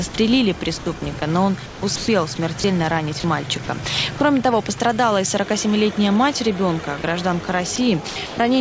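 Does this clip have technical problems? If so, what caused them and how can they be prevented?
Yes. Sound dropped by the voice detector: brief gaps at 0.10–0.14 s, 4.18 s, 4.78 s and 7.02 s are likely the sender's voice detector mistaking the sound for background, so flat comfort noise replaced it. On a waveform these look like short notches of low, even noise. Lowering the detector's threshold or adding hangover time would prevent this.

Sound chopped by the voice detector: at 0.78–2.64 s, 3.20–3.68 s and 7.76–8.38 s the detector likely toggled repeatedly, splicing in comfort noise and making the sound choppy. A spectrogram shows stripes of smooth synthetic noise, all cut off at 8 kHz by the G.722 path, alternating with real sound. Disabling voice-activity detection, or making it less aggressive, would prevent this.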